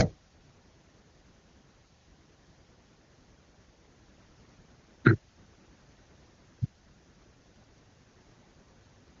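Nothing stood out on listening to this speech clip; it carries the wideband band-limited character of an AMR-WB HD Voice call at a high rate.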